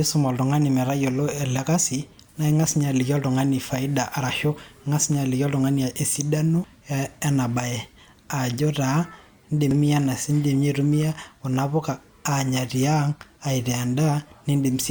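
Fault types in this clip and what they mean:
Damaged data in a compressed stream: part of the encoded speech stream was corrupted, so the decoder could not read those frames correctly, lost its place and had to resynchronise on the next valid frame header. Each failure comes through as a very short chirp or blip breaking into the speech, once at 6.64 s and again at 9.71 s, both lasting only a few milliseconds before normal decoding resumes.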